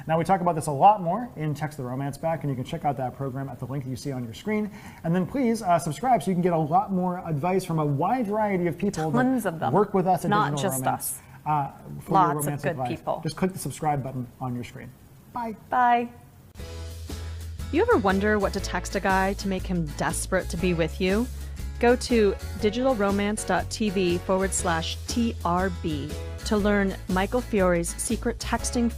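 From 13.65 s to 16.37 s the sound turns coarser, rough, watery or muffled, before clearing again by the end of that span. This is a call bitrate drop. The call's bandwidth estimate fell, and the Opus encoder was pushed from 64 kbps down to 26 kbps, holding that lowest rate for about 1.65 s. With fewer bits, each frame is coded more crudely until the rate climbs back.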